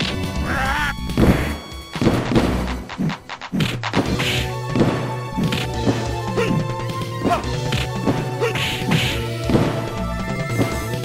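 No technical faults are audible.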